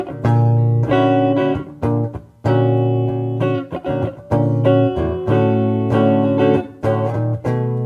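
No technical faults can be heard anywhere in the audio. There is nothing in it that calls for a timestamp or an explanation.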